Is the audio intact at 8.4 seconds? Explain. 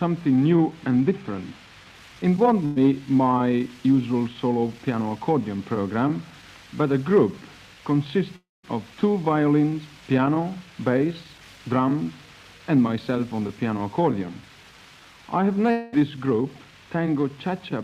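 No. From 8.36 to 8.65 s the sound breaks off in what is likely a long network dropout: audio stopped arriving, so the receiver stretched the last sound into a fading buzz, then held near-silence for about 0.19 s before playback resumed, with roughly 0.28 s never played.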